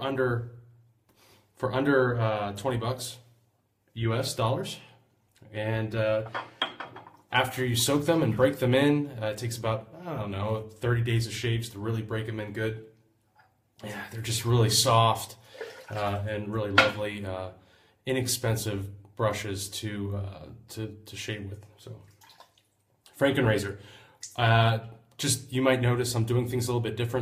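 No technical faults can be heard in this audio.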